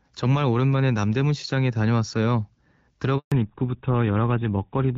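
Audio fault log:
3.18–3.32 s, handover gap: the call switched networks and the sound drops out for 140 ms, since no speech frames got through mid-switch.
3.32 s to the end, fallback to narrowband: after the gap everything above 4 kHz is gone, so it turns duller and rougher, which fits a drop from AMR-WB at 12.65 kbit/s to GSM full rate.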